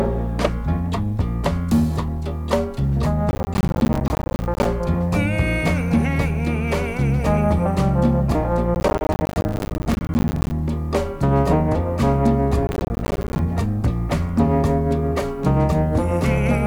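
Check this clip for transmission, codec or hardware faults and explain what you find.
There is one fault, processor overload crackle, in three bursts: 3.31 to 4.65 s, 8.75 to 10.51 s, and 12.67 to 13.39 s. The processor repeatedly missed its deadlines on what sounds like roughly 10 ms buffers, leaving dozens of hard-edged silent gaps that produce gritty crackling tearing.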